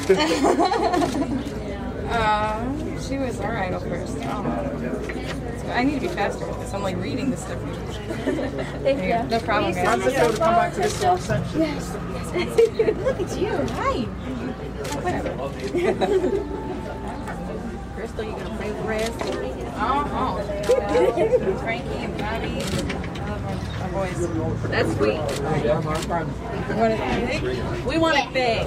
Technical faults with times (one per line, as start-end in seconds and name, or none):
11.56 lost LE Audio frames
18.18 lost LE Audio frames
25.33 lost LE Audio frames